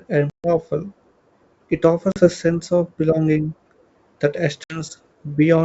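Three hard-edged holes break the speech: 0.30 to 0.48 s (140 ms missing), 2.12 to 2.28 s just before "sense of belonging" (40 ms), and 4.64 to 4.83 s (60 ms). After each gap the sound returns slightly distorted before settling. This is packet loss on an ADPCM call, with roughly seven, two and three packets lost. Silence filled the gap, and the decoder's predictor and step size drifted from the sender's until they resynchronised. The wideband G.722 sound around the gaps, consistent with 64 kbit/s, stays clear.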